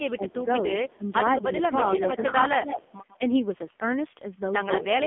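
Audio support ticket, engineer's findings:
AMR narrowband mobile codec on the call path, whole clip: nothing above 3.6 kHz, speech buzzy and synthetic, heavy damage pointing to a low mode near 5.9 kbps.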